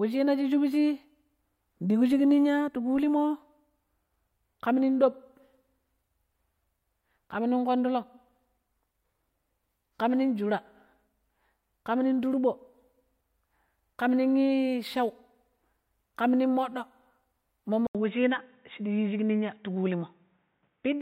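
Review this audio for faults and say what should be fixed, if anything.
At 17.87 s an 80 ms gap appears, then the spectrogram stops dead at 3.8 kHz until the end, likely an input switched to a poorer device. Lock recording to one fixed microphone so the system cannot change input devices mid-take.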